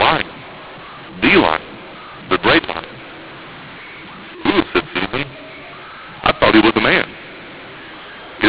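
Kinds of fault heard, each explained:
mu-law and A-law mixed up, throughout: speech coded as G.711 A-law is decoded as mu-law, so each 8-bit code maps to the wrong level. Loudness comes out scrambled, speech turns harsh and distorted, and the quietest samples rise above silence, filling pauses with noise.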